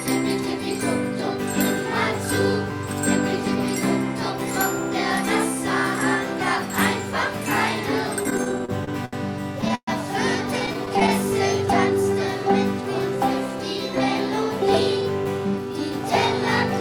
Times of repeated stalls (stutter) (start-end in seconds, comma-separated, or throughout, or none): 8.23-9.89, 10.59-11.10